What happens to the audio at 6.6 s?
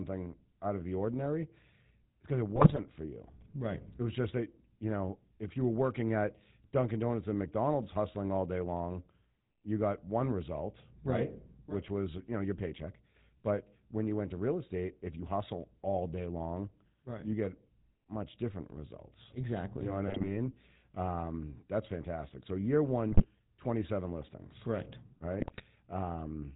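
At 6.6 s you're hearing GSM full-rate codec damage, and it runs through the whole clip rather than just that moment. The codec rebuilds the speech from a vocal-tract model fed by evenly spaced pulses, keeping only every third excitation sample, with nothing above 4 kHz. That gives the plainly audible buzzy, gravelly roughness and dull top end, which fits the old 13 kbps full-rate coder.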